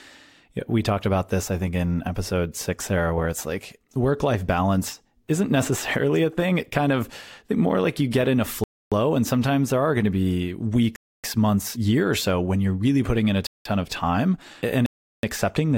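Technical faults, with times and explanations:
8.64–8.92 s, 10.96–11.24 s, 13.47–13.65 s, 14.86–15.23 s: block of digital silence. The speech drops to silence for 0.28, 0.28, 0.19 and 0.37 s. The waveform shows flat lines, and the spectrogram shows blank columns. The last two lengths, 8192 and 16384 samples, fit whole multiples of an audio buffer that wasn't filled in time.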